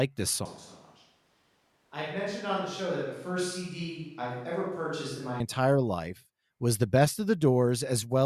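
At 0.46 s the speech suddenly turns roomy and hollow, loses bass, drops roughly 10 dB in level, and picks up faint background noise, then snaps back at 5.4 s. This is likely a switch to a distant microphone while the close microphone's signal was missing.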